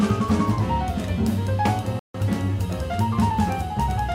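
At 1.99 s the player runs out of downloaded audio and halts until more data arrives, a rebuffering stall. The sound cuts to silence until 2.14 s, then picks up exactly where it stopped, so nothing is skipped but 150 ms is added.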